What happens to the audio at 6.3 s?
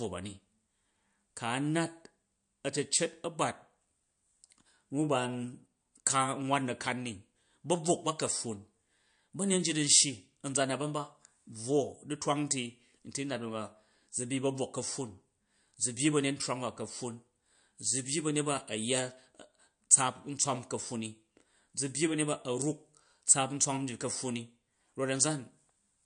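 At 6.3 s the speech is passing through the same damage it carries from start to finish, most likely MP3 compression at a low bitrate, something near 53 kbps. Short of bits, the encoder has cut off the treble, so nothing remains above 9.8 kHz, and it has dropped weak frequency lines that flicker on and off between frames. The result is plainly audible: a dull, band-limited sound with a watery, swirling texture and metallic chirps on s sounds.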